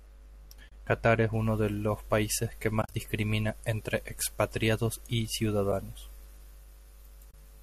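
Speech with AAC frame loss with muting at 0.69–0.72 s, 2.82–2.94 s, 5.72 s and 7.31–7.34 s. Whole decoded frames were zeroed, so the audio fades out and back in. On a spectrogram these show as full-band vertical gaps with soft edges, and in the waveform the envelope tapers to silence. The gaps are about 30 ms, 10 ms and 30 ms long, which fits the roughly 10 ms frames of what is likely low-delay AAC. At 2.82 s, 80 ms of frames drop out scattered across 120 ms, with the longest hole around 40 ms. From 1.33 s to the end, pre-emphasis is left on: treble boosted for transmission was never cut back, so the sound turns thin, bright and sibilant. The spectrogram shows the upper bands lit noticeably brighter, about 11 dB up at 10 kHz relative to 1 kHz, which fits a 50 µs FM curve.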